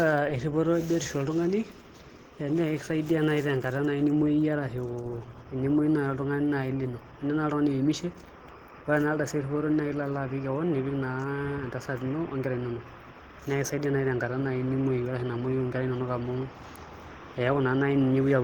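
Throughout the speech, the sound is muffled, hoarse and grainy, plainly audible damage likely from Opus compression in its hybrid speech mode, pointing to roughly 16 kbps. A spectrogram shows fullband content to about 20.2 kHz, but the upper bands are noise-filled, without crisp harmonics.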